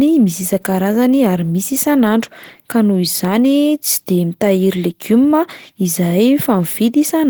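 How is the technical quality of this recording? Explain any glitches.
The recording has plainly audible Opus voice compression throughout, from start to finish. The codec is running in its hybrid mode, with a linear-prediction coder handling the band below 8 kHz and a transform layer above it, at a bitrate low enough to fit roughly 16 kbps. The excitation is coded coarsely, so the speech comes out hoarse and slightly robotic, with a grainy, muffled quality. The band still reaches about 20 kHz.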